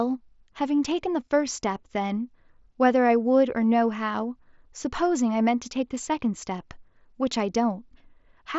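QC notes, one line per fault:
No faults were found in this speech clip. The Bluetooth mSBC headset codec path is audible as a band limit with nothing above about 7.7 kHz and a light graininess on louder passages, which fits the wideband headset codec working as intended.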